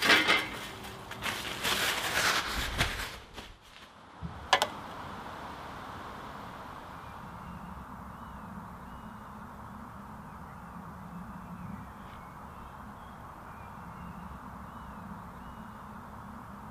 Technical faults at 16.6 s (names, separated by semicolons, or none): none